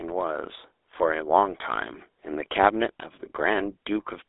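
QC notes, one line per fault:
throughout: GSM full-rate codec. The speech passes through a pulse-excited vocal-tract coder, consistent with 13 kbps GSM full rate. A sparse, regularly spaced excitation replaces the real source, giving a plainly audible buzzy, gravelly roughness. The band sits near 300 Hz to 3.6 kHz, with nothing above 3.8 kHz.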